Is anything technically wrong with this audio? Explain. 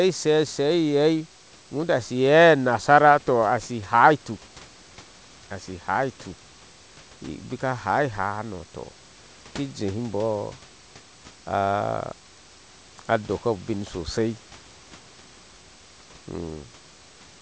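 No, nothing in this speech recording points to a technical fault. It has passed through a normally working call path whose codec leaves nothing above 8 kHz, and the room noise sits about 32 dB below the speech.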